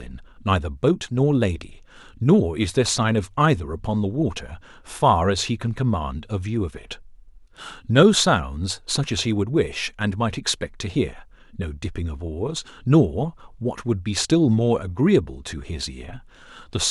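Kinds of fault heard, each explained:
No technical faults are audible.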